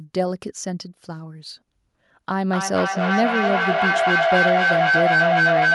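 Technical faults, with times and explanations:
2.48–5.74 s, feedback echo between two devices: another device's loudspeaker reaches this microphone, past its echo canceller, so sound returns roughly every 0.3 s, thinner and ringing, building to about 5 dB over the speech; spectrograms show evenly spaced, narrowing copies; the waveform swells without decaying.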